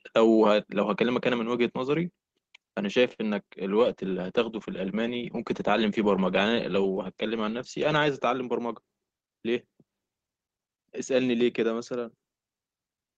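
A short stall from a late packet at 3.13 to 3.21 s: the jitter buffer ran dry, so the receiver held the last sound for 50 ms, then resumed without loss.

A call bitrate drop from 3.83 to 9.47 s cut the encoder from 32 to 12 kbps for about 4 s at the lowest, narrowing bandwidth from 20 kHz to 8 kHz and leaving the speech muffled and rough.

A jitter buffer speed-up from 9.12 to 9.87 s trimmed roughly 70 ms of pitch periods to shed excess delay, so the speech runs 8% fast at unchanged pitch and sounds hurried.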